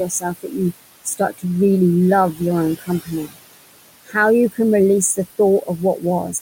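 Noise suppressor artifacts run throughout: the suppressor pulls the room noise, which sits about 14 dB under the speech, down by about 20 dB between phrases. Speech cut by the noise suppressor occurs at 0.05–0.73 s, 1.04–1.44 s, 2.79–3.10 s, 3.26–3.37 s and 4.05–4.15 s, where parts of the speech are mistaken for noise and dropped by about 15 to 20 dB, so they sound swallowed and faint.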